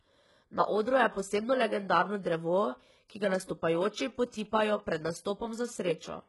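From start to finish the speech has that telltale smeared, synthetic top end, likely from HE-AAC compression at a very low bitrate, something around 12 kbps. The core of the sound is carried by a narrow coded band, and the treble above it is faked by copying lower bands upward, so the harmonics up there don't line up with the real ones. The damage is heavy: s sounds come out gritty and lispy, with a metallic sheen, and nothing at all survives above 11.5 kHz.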